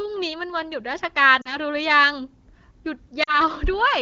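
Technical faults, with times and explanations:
1.41 to 1.57 s and 3.23 to 3.41 s, lost AMR speech frames: each time about 40 ms of wideband speech, two frames, went missing. The decoder stretches the last good pitch and vocal tract shape with falling gain, giving a smeared, fading warble rather than a hard cut to silence or a click.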